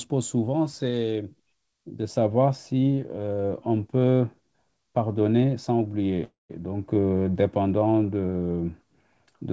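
At 6.24 s the speech stops moving forward and you get a call audio freeze that lasts until about 6.51 s. The last bit of sound carries on as a fading buzz for a moment, then roughly 160 ms of near-silence. Then the speech picks up right where it left off, so nothing's lost, just pushed back by about a quarter second. That points to packets likely stalling in transit and the jitter buffer running dry. The wideband call path carries nothing above 8 kHz throughout.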